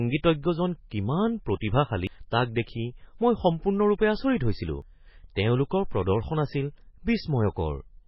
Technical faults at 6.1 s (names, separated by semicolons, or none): MP3 compression